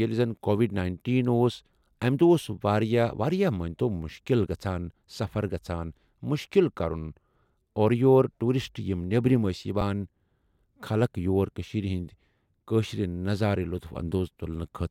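Speech clip with one underrun with held sample at 9.81 s: the output briefly ran dry and held its last value for about 4 ms, then resumed right where it stopped.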